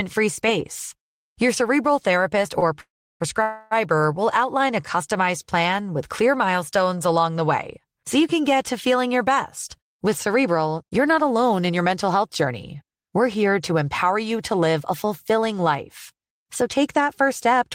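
It's a speech clip, and the trouble clusters early and then again in the middle. Right after "cerebral therapist", around 2.59 to 2.76 s, there's a short stall from a late packet: the jitter buffer ran dry for a moment, so the receiver stretched the last bit of sound by about 25 ms until the packet showed up. You hear a syllable hang a touch too long, but nothing is actually lost. Straight after that come two call audio freezes, at 2.81 to 3.22 s and 3.42 to 3.73 s, which are likely down to packets being held up in transit and the buffer emptying again. In the first, the receiver fills 389 ms, with the held sound fading out and then about 330 ms of outright silence. The second fills 289 ms and never drops to silence, so it's more of a drawn-out smear. In both cases the speech picks up exactly where it left off, so a gap has been inserted rather than anything cut. Later, just after "get to feeling your", from 9.69 to 13.50 s, there's a jitter buffer speed-up running at about 107%. 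The buffer had built up more audio than it wants, so the receiver kept snipping out tiny pitch-period-sized chunks, around a third of a second in total. The talker sounds a bit rushed while the pitch stays put. A milder speed-up follows from 14.15 to 15.47 s at about 105%, trimming a little under a tenth of a second, which gives a slight hurried feel.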